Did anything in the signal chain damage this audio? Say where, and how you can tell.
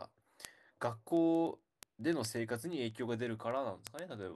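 Yes. Word clock ticks are audible from 0.15 s to 4.35 s as sharp clicks roughly every 0.07 s, about 70 in all. The receiver on the digital link isn't locked to the sender's clock. A mismatch of roughly 400 ppm forces a one-sample slip at each tick.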